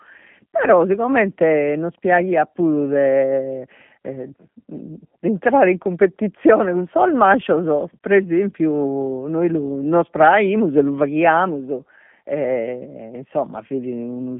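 The G.729 codec runs throughout: speech rebuilt from a vocal tract filter and pitch predictor, fitting 8 kbit/s, sounds plainly rough and synthetic, nothing above 3.5 kHz.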